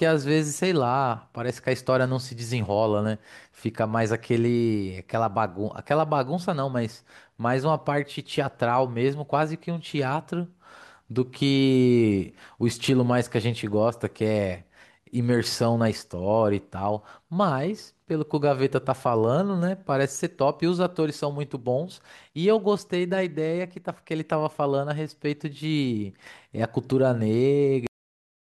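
At 27.87 s the speech has a cut-off end. The final stretch of audio was never written out, so the sound stops mid-utterance and drops straight to digital silence for the remaining 0.56 s. What separates this from a deliberate fade or a natural ending is the complete absence of decay: there is no tapering of level and no room tail, just an instantaneous edge from active speech to a dead-flat floor.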